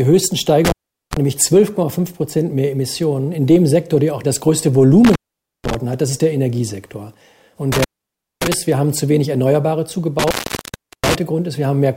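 Intermittent contact occurs four times, at 0.65–1.17 s, 5.05–5.75 s, 7.72–8.54 s and 10.19–11.15 s. A loose connection opens, and the sound drops out for 0.39, 0.49, 0.57 and 0.73 s respectively. Crackle marks each break and faint hiss fills the gap.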